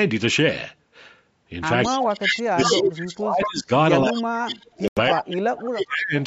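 Echo leak from 1.83 to 2.82 s: a second copy of the speech trails the talker by 214 ms, only about 5 dB below it. The far end's echo canceller likely failed to remove what its microphone picked up from its loudspeaker, so the played speech returned as a delayed duplicate. The same echo recurs from 3.43 to 3.48 s at about 10 dB down, from 4.16 to 4.67 s at about 15 dB down, and from 5.08 to 5.16 s at about 10 dB down.

Speech suppressed in double talk from 1.89 to 3.7 s and again from 4.09 to 6.14 s: the speech on the loudspeaker side dips and cuts out in pieces, by roughly 30 dB in the first stretch and 40 dB in the second. With both sides active at once, the canceller likely could not separate its own talker from the loudspeaker echo and turned both down.

Bluetooth stall from 4.88 to 4.98 s: the sound drops to 89 ms of silence and then picks up again, likely because interference delayed packets, the headphone buffer ran empty, and playback waited for the resent audio.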